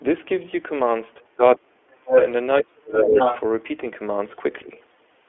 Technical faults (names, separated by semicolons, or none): iLBC codec; speech suppressed in double talk; other side's voice leaking through